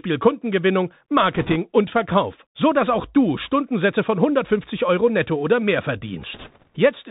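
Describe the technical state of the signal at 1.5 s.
At 1.5 s the speech is passing through a Bluetooth CVSD headset codec, whose damage is plainly audible throughout and consistent with a 64 kbps CVSD link. The coder sends a single up-or-down bit per sample and adapts its step size, so nothing above 4 kHz survives. Loud, bright sounds outrun the step and distort, sibilants come out scratchy, and a fine granular hiss sits under the speech.

The moment also falls inside a burst of bit errors on a Bluetooth voice link, running from 1.34 s to 1.56 s. Flipped bits on the headset link each nudge the decoded waveform by an error that grows with the speech level, and the error decays quickly, so there are no sharp clicks. Instead the speech takes on a rushing, crackly noise, consistent with an error rate of a few percent over that stretch.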